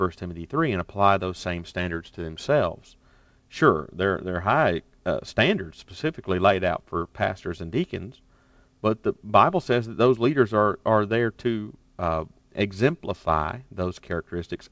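Speech over a call path whose band ends at 8 kHz, consistent with a G.722 wideband codec, and no technical faults found.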